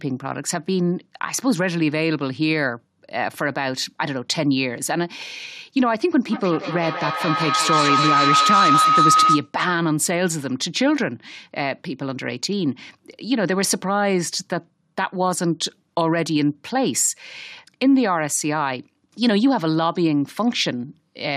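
From 6.27 to 9.55 s, a feedback howl near 1.5 kHz, with the loop repeating roughly every fifth of a second, peaks about 4 dB above the speech. The microphone-to-loudspeaker loop keeps gaining level on each trip.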